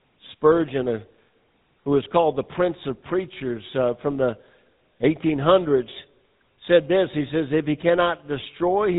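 From start to finish the speech carries GSM full-rate codec damage. The coder rebuilds the voice from a vocal-tract model fed with sparse, regularly spaced pulses. That gives a buzzy, gravelly roughness. Nothing above 3.8 kHz survives, so the sound is dull and narrow. The damage is plainly audible.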